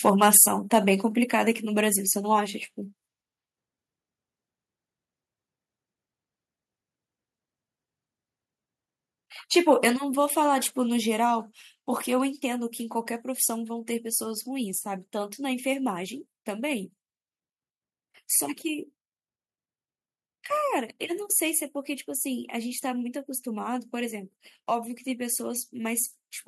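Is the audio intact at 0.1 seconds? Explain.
No. From 0.05 to 0.44 s the speech shows microphone overload: the input was likely set too high, driving peaks about 8 dB past the converter's limit so their tops are sheared off. It sounds harsh and crackly. On the waveform the peaks sit as flat plateaus, and on a spectrogram broadband smearing shows above the harmonics.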